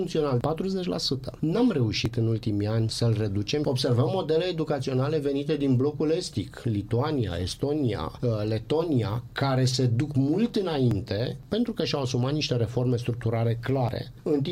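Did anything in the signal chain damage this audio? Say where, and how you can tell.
Yes. Jumps occur at 2.06, 10.91 and 13.89 s. No silence appears. The audio skips ahead, roughly 10 ms twice and about 40 ms at the last. This is likely a dropped buffer (overrun) at the driver stage, where unread samples were overwritten.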